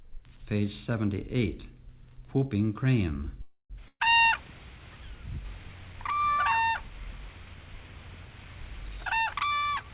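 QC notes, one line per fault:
3.42 to 3.72 s, call audio freeze: the sound stalls for about 0.28 s. The last sound is stretched into a fading buzz or hiss that ends in roughly 70 ms of silence, and then the audio picks up exactly where it stopped. This points to packets that were likely delayed until the jitter buffer ran dry. Unlike a loss, nothing is skipped, and the audio simply runs that much later afterwards.
3.88 to 4.02 s, burst of packet loss: a gap of about 0.12 s is bridged by a held, fading continuation of the preceding sound with about 40 ms of silence, and when the audio resumes it has jumped ahead by about 120 ms. Consecutive packets never arrived in time, so that stretch of audio is missing. This differs from the freeze just before it, which only delayed the audio.
9.06 to 9.9 s, jitter buffer speed-up: the final stretch plays about 28 percent fast while the pitch stays put, so it sounds hurried rather than chipmunk-like. 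The buffer had accumulated excess delay and shed roughly a fifth of a second by cutting out many short pitch-period-sized pieces in succession, which is what separates it from a plain resampling speed change.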